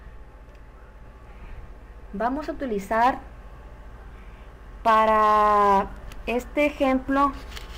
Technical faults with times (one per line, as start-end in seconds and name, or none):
1.25-7.15 word clock ticks